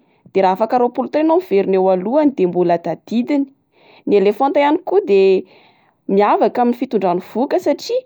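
Nothing stood out on listening to the speech here.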